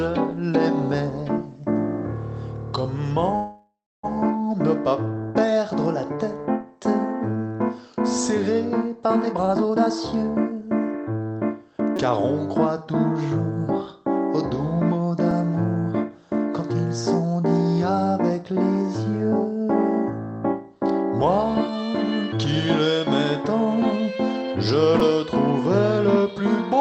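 At 3.35 to 4.05 s the audio stretches into a fading buzz, then about 0.29 s of silence before resuming intact: a call audio freeze, likely from delayed packets draining the jitter buffer. From 9.26 to 11.25 s the sound hurries at an unchanged pitch, playing at about 134% speed. This is a jitter buffer speed-up, where the receiver trimmed roughly 0.7 s of pitch-period slices to shed the accumulated delay. Brief buzzy stutters at 11.96 to 11.98 s, 15.31 s and 25.00 s are a repeated buffer: the device replayed a 5.33 ms block, which fits a 256-sample buffer, when new audio arrived late. Throughout, the Opus call path's coding noise and its 8 kHz bandwidth ceiling can be heard.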